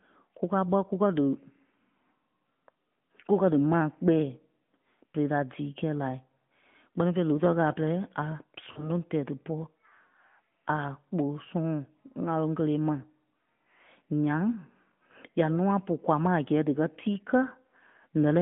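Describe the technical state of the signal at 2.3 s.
At 2.3 s the speech carries the AMR narrowband mobile codec, present throughout. Frame-based vocal-tract modelling leaves a 150 Hz to 3.4 kHz band with a plainly buzzy, synthetic edge, which fits a bitrate near 10.2 kbps. A simple telephone filter would narrow the band without that coded texture.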